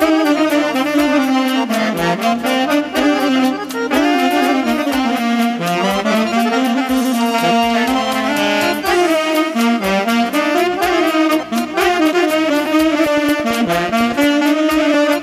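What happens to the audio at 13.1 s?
At 13.06 s a train of clicks begins and runs to 14.25 s: around ten sharp, similar ticks at a regular 9 per second, peaking about 5 dB above the signal. The likely cause is interference from nearby equipment or an unstable interface.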